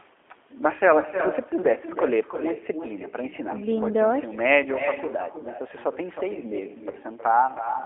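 A speech recording carries three faults. The first is echo with no canceller. Every phrase returns about a third of a second later as a thinner copy, about 9 dB quieter. A far-end loudspeaker feeds its microphone, and nothing removes it. The second is G.729 codec damage, plainly audible throughout. The sound is rough and slightly synthetic, confined to 250 Hz to 3.5 kHz, which fits an 8 kbit/s G.729A stream. The third is VoIP packet loss concealed by the speech codec, from 6.91 to 6.95 s. A brief stretched, fading sound replaces the speech, which fits one lost 20 ms packet. The decoder extrapolated the missing audio, and the voice stays weak or distorted afterwards.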